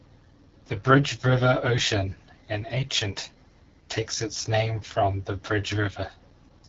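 AMR wideband (HD Voice) codec damage runs through the whole clip. The speech has the rough, raspy texture of a low-rate setting, which fits the 8.85 kbit/s mode, one of the two lowest. At that rate the pulse-driven vocal tract model gets too few bits to follow the voice closely, so the speech up to 6.4 kHz comes out coarse. Above that there is only a thin band of shaped noise, and nothing at all above 7.5 kHz.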